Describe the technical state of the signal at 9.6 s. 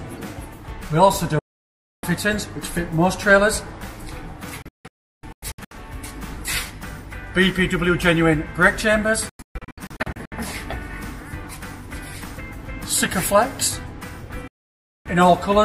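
At 9.6 s you're right inside a digital broadcast dropout running from 9.29 to 10.32 s. The receiver kept losing good frames and muting, so the sound breaks into several short holes, the longest 128 ms, with about half that second gone, each cut fading in just 3 ms.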